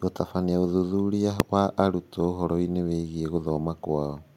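A speech clip with a single sharp bang at 1.40 s, just before "wa arutwo", caused by invalid numbers at full scale. A calculation produced infinite or invalid values that were pinned to maximum level for about 1.33 ms, which fits a 64-sample processing block. On the waveform this shows as a thin flat bar at one extreme value, far beyond the speech peaks, and on the spectrogram as a bright vertical line across all frequencies.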